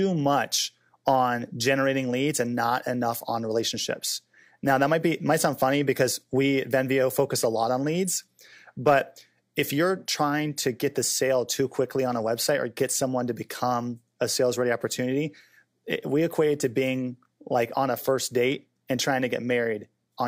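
A speech recording with nothing technically wrong with it.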